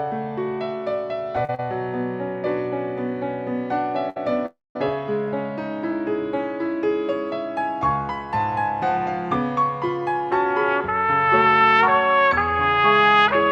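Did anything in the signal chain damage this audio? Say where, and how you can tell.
Yes. Late packets emptied the network jitter buffer, causing short stalls from a late packet: the sound is held 40 ms at 1.45 and 1.55 s, and 63 ms at 4.10 s.

Packets were likely held up in the network, causing a call audio freeze from 4.46 to 4.76 s. The last sound is continued and fades, followed by 200 ms of silence, inserting a gap.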